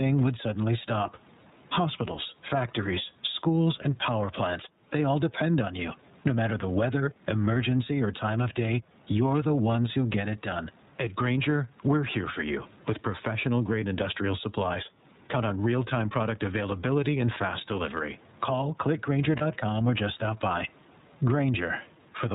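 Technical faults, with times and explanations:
Throughout: gain pumping. The background, a room noise sitting about 41 dB below the speech, is there, and the gain swings by around 15 dB. The likely cause is gain set far too high, with a fast limiter clamping down on each peak. On the waveform, loud and quiet passages sit at nearly the same height with flattened tops.
Throughout: iLBC codec. The speech is intelligible but has a plainly audible rough, slightly synthetic grain, and everything above 4 kHz is missing, so sibilants lose their hiss and the sound is narrowband and boxy. This fits iLBC in its 13.33 kbps mode with 30 ms frames, where each frame's excitation is coded on its own from a compact model. A spectrogram shows a hard ceiling at 4 kHz with a smeared, less detailed harmonic structure below it.
19.37–19.42 s: lost iLBC frames. A single 30 ms frame goes missing, and the decoder fills the gap by repeating the last pitch cycle blended with noise. 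This comes across as a brief held, faintly buzzy vowel-like tone. Because each iLBC frame decodes independently, normal speech returns immediately afterwards. On a spectrogram, the gap appears as a short stretch of frozen, evenly repeated harmonics with a grainy overlay. On the waveform, it is a run of near-identical periodic cycles.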